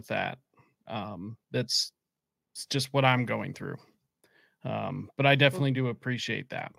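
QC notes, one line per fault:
No faults heard anywhere in this speech recording.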